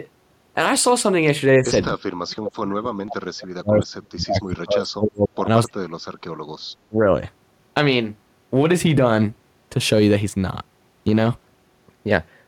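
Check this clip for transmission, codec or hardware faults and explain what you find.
Four stretches of the speech sink in level. At 1.59 to 1.70 s the voice dips by about 10 dB, and from 2.21 to 5.47 s it drops by up to roughly 40 dB, affecting about three seconds. At 5.66 to 5.80 s it falls by up to roughly 40 dB again, and at 6.89 to 7.15 s by about 20 dB. The likely cause is speech suppressed in double talk: an echo canceller that cannot tell the local talker from loudspeaker echo while both sides speak, so it attenuates the talker along with the echo.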